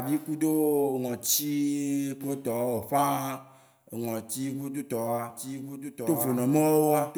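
A speech recording with a doubled audio track from 5.30 s to the end. A second full-band copy, about 5 dB quieter and roughly one second behind, cuts in abruptly. Unlike room echo, it has no decay or reverberant colour. It was likely captured twice through a slower path.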